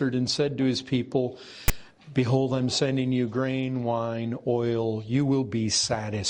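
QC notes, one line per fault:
1.68 s, file tags played as audio: a brief hard-edged burst of loud rasping static, lopsided toward one polarity. A block of text metadata was decoded as sample data, and the skewed byte values of text characters give that harsh, offset buzz instead of plain noise.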